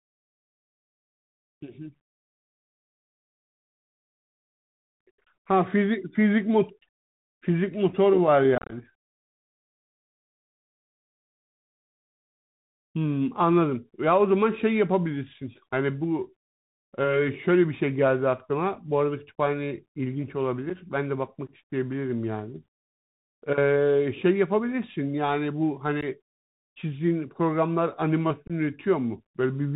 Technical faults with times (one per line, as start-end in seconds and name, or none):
0.00-29.75 Bluetooth CVSD headset codec
8.58-8.74 unconcealed Bluetooth headset packet loss
20.70 unconcealed Bluetooth headset packet loss
26.01-26.04 unconcealed Bluetooth headset packet loss
28.47-28.52 unconcealed Bluetooth headset packet loss